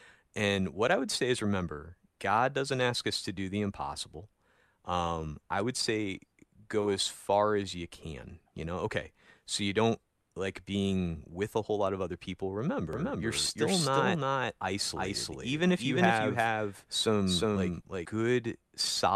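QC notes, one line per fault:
12.93–18.05 s, doubled audio track: a second full-band copy of the speech runs roughly 0.4 s behind the original at about the same level, so every phrase is heard twice in quick succession. The copy carries no decay or room colour, unlike a reflection, and it cuts in and out abruptly at the range edges. This likely comes from the signal being captured a second time through a slower path, or from an edit holding two offset copies.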